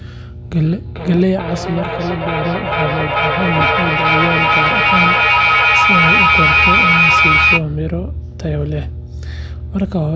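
A ground loop or nearby transformer leaks the power line into the signal for the whole clip, leaving a steady 60 Hz mains hum only around 10 dB below the speech. From 0.65 to 7.67 s, two devices in the same room create a feedback echo between them: each phrase returns roughly every 0.4 s, thinner and more ringing, building up to about 6 dB above the speech rather than fading.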